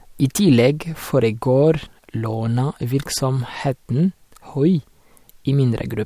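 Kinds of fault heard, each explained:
No faults can be heard in this speech clip.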